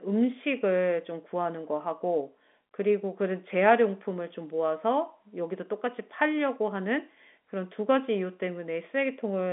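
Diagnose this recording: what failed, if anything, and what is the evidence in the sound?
No faults found here.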